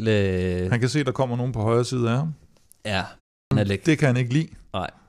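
The output device appears to drop into a low-power state during the 0.31 s pause in this speech clip and takes time to wake again, so it produces a clipped start after a pause: about 83 ms at 3.43 s is swallowed and speech resumes abruptly, missing its first sounds.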